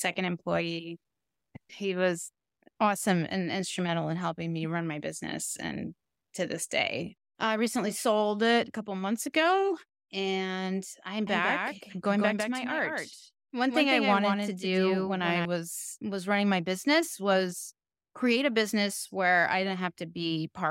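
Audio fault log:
11.27–15.45 s, doubled audio track: after "months ago and I'm", the speech repeats about 150 ms late and about 5 dB quieter, likely from a second capture path. Unlike echo, the single full-band copy has no decay and cuts off abruptly before "was running my business".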